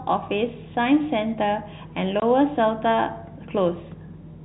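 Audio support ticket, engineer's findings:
Packet loss filled with silence at 2.20–2.22 s. A 20 ms hole cuts the speech to dead silence. Hard edges at both ends. Likely component: network jitter buffer and receiver. Lost packets replaced with zeros, no concealment. Gap length fits two 10 ms packets. Surrounding audio tops out near 4 kHz, as expected of G.711 telephone coding.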